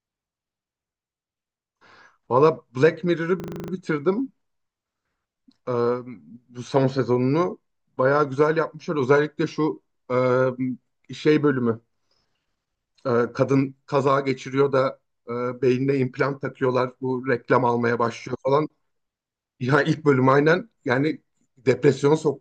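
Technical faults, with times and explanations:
3.40–3.72 s, system hang loop: the playback locks up and a single 40 ms slice of the speech repeats eight times back to back, giving a rattly 25 Hz stutter. The driver froze while the hardware kept cycling its ring buffer, and practically nothing goes missing afterwards.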